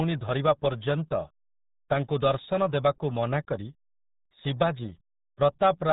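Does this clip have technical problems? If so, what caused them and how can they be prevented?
Yes. Throughout, the speech sounds muffled and gargly, with nothing above 3.8 kHz and heavy codec damage, which fits an 8 kbit/s RealAudio 14.4 codec, a dial-up-era coder that discards most spectral detail to fit a modem line. Prevent it by encoding with a modern wideband codec at a higher bitrate.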